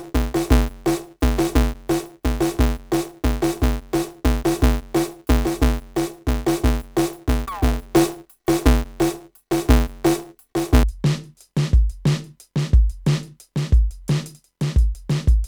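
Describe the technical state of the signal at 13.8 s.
At 13.8 s the music plays through intact, with no audible fault at that moment.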